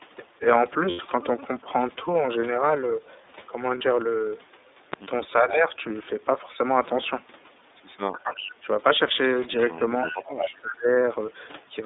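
The whole recording has a thin, slightly rough and synthetic quality, with nothing below about 250 Hz or above about 3.7 kHz. That is the iLBC codec: a narrowband call codec coding each frame on its own, here fitting its 13.33 kbps mode with 30 ms frames.

From 0.90 to 1.00 s, and again from 3.78 to 3.82 s, the sound turns into a brief held, faintly buzzy tone before snapping back. These are lost iLBC frames. The decoder fills each gap by repeating the last pitch cycle with added noise. The first gap of 90 ms fits three lost frames and the second of 30 ms fits one.

At 4.94 to 4.96 s a sharp loud pop, about 15 dB above the audio, lands on top of the sound, which carries on underneath. A single electrical pulse, likely from a switch, plug, static or driver glitch, was added to the signal.

From 5.33 to 5.73 s the level dips by roughly 15 dB. This is speech suppressed in double talk. When both sides talked at once, the echo canceller likely could not separate the talker from the loudspeaker echo and turned everything down.

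From 8.13 to 8.52 s a copy of the sound trails 369 ms behind, about 10 dB quieter. This is an echo leak: a far-end loudspeaker's echo was likely not fully cancelled and was sent back.

Another double-talk dip of roughly 15 dB follows from 8.55 to 8.68 s.

The longest and deepest double-talk suppression runs from 9.98 to 10.97 s, dropping the level by roughly 25 dB for about a second. Inside it, from 10.07 to 10.46 s, the same 369 ms echo leak returns at about 10 dB down.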